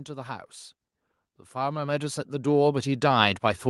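From 1.52 s to the end, automatic gain rising: the gain control judged the input too quiet and ramped up, so speech and background swell together.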